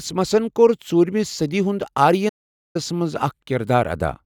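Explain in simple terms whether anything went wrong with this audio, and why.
At 2.28 seconds, right after "کوٚر ژوٗرِمہِ صٔدی ہُنٛد", the speech goes completely silent until 2.76 seconds, a pause of almost half a second. This is a playback stall, likely the player briefly running out of audio data. Unlike a tiny dropout or click, the silence lasts long enough to clearly interrupt the flow.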